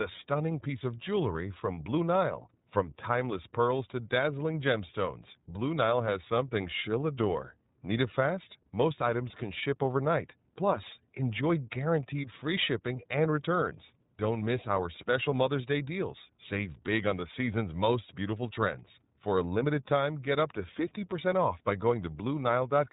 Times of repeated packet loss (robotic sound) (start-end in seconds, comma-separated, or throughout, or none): none